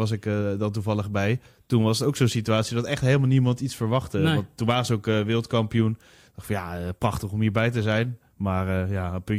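No technical faults can be heard anywhere in this speech recording. There is nothing in it to place on the timeline or describe as a problem.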